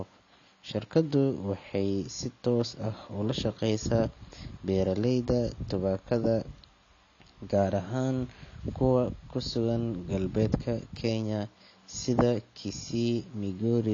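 Speech throughout with plainly audible AAC compression damage: nothing above 6.9 kHz, leaving it dull and smeared, with a warbling, fizzy texture on sibilants. The likely cause is low-bitrate AAC-LC coding, which fits roughly 24 kbps, coarse quantisation and spectral holes.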